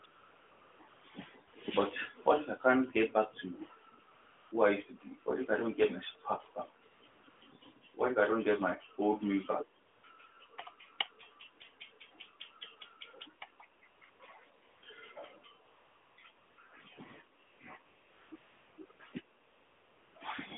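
AMR comfort noise fills over twenty pauses from 0.0 to 20.16 s, for example after "get my spark back". The phone stopped sending frames, so smooth synthetic hiss replaces the real background. On a spectrogram it shows as flat, featureless noise blocks inside the narrowband 250 Hz to 3.5 kHz line.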